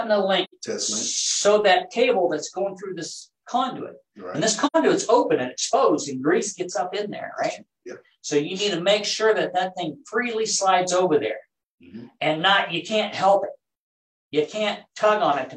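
Soft-edged dropouts open at 0.44 to 0.54 s and again at 4.66 to 4.76 s, the sound fading out and back in around a silent gap. This is AAC frame loss with muting: about 85 ms of audio, which fits two lost frames, was decoded as zeroed spectrum.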